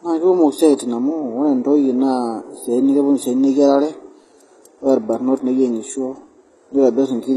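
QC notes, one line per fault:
Throughout: transcoding between lossy codecs. Nothing is heard above 12.3 kHz. Two kinds of coding artefacts overlap in the speech. This likely comes from a Vorbis encode re-encoded as HE-AAC, fitting roughly 30 then 16 kbit/s.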